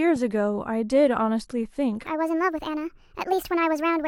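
From 2.06 s to the end at 4.07 s, the speech jumps into a wrong sample rate fault: the audio runs 1.5 times too fast and sounds about 7 semitones higher, so the voice turns high and hurried. Speed and pitch move together because the samples are being clocked out faster than they were captured with no resampling in between, which fits 32 kHz material played back at 48 kHz.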